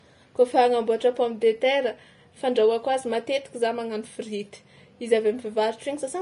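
From start to finish the speech is hissy and grainy, with nothing above 10.6 kHz and blurred consonant attacks. This is likely Vorbis compression at a low bitrate around 34 kbps. Coarsely quantised treble turns to noise-like fizz, unlike a plain low-pass, which just sounds dull.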